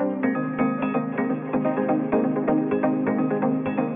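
Aliasing runs through the whole clip. The audio appears to have been resampled down to around 6 kHz without a low-pass filter first, so content above the 3 kHz folding point was not removed. Instead it mirrors back below 3 kHz as spurious tones unrelated to the original sound. The folded energy sits roughly 20 dB below the signal, adding a gritty, metallic edge, and the spectrum stays dense right up to the 3 kHz band edge.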